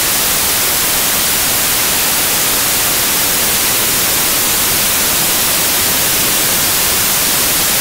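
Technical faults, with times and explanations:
Throughout: samples built from the wrong bytes. Misassembled sample bytes promote fast-changing low bits into loud, harsh broadband noise. The spectrogram is a broadband wash, and the waveform is dense hash.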